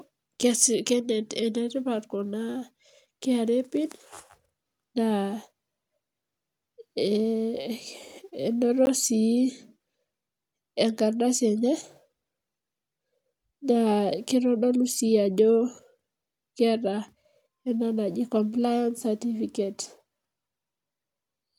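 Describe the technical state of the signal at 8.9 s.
At 8.86 s a 15 ms block of samples is replaced by zeros, a block of digital silence. The speech cuts out and back abruptly, with no fade, leaving a brief tick or pop.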